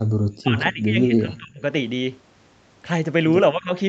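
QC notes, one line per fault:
0.42–1.63 s, speech suppressed in double talk: the speech sinks by about 30 dB in pieces over roughly a second, likely an echo canceller ducking it while both sides talked.
3.52–3.73 s, speech suppressed in double talk: a briefer dip of about 15 dB, likely the echo canceller again turning the near talker down during overlapping far-end speech.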